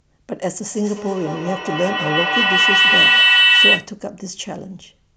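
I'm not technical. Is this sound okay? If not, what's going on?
No. From 0.71 to 3.96 seconds there is a feedback howl. Two devices on the same call are sitting close enough that one picks up what the other plays. Each pass around that loop comes back louder instead of dying away, so the sound narrows into a shrill whistle around 3 kHz. It pulses roughly five times a second and grows louder than the speech before it stops.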